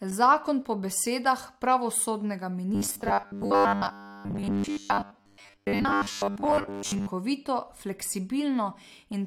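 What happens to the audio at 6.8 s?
At 6.8 s there is robotic sound from repeated short buffers, running 2.75 to 7.09 s, starting after "po besedah pravosodnega". A rigid 100 Hz buzz is imposed on the speech, likely from 10 ms blocks being replayed while most real audio is skipped. Spectrograms show harmonics spaced every 100 Hz. The waveform roughly repeats 10 ms cycles.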